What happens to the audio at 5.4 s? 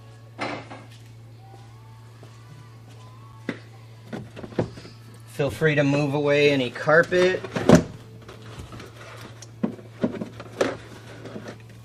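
Nothing goes wrong at 5.4 s; the audio plays through that moment intact, with no dropout, click, glitch or other fault.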